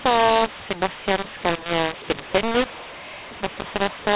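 Throughout, the speech has a mu-law and A-law mix-up: mu-law samples are decoded with the A-law curve, which scrambles the levels. It sounds harsh and gritty, and pauses fill with hiss. The waveform shows jagged amplitudes and a raised floor, and the spectrogram shows broadband smear below 4 kHz.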